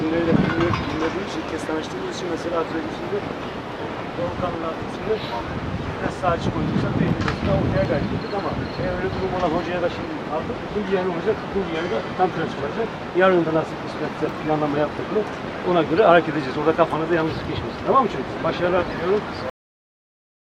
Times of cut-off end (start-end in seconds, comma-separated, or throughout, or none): 19.50-20.49